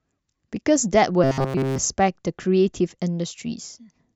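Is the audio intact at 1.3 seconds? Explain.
No. Robotic sound from repeated short buffers covers 1.24 to 1.78 s. It is likely a short 7.5 ms buffer replayed, forcing a rigid, metallic 134 Hz buzz throughout.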